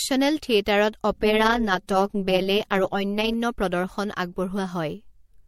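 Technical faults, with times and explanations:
throughout, generation loss: speech likely passed through a 64 kbit/s MP3 about four times, compounding swirly, hollow smearing, blurred attacks, and nothing above 16.5 kHz.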